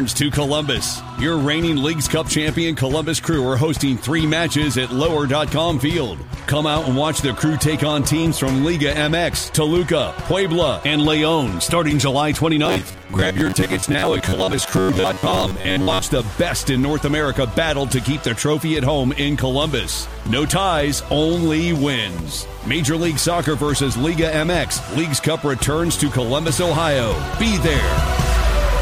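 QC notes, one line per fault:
12.66 to 16.08 s: robotic sound from repeated short buffers. The audio collapses into a stiff metallic buzz pitched at about 94 Hz that only loosely tracks the underlying sound. This is likely the software starving for data and looping the last chunk, roughly 10.7 ms long (one over 94 Hz), to fill gaps, so about half of this stretch is repeats while real audio gets skipped. That fixed loop length is what sets the buzz rate.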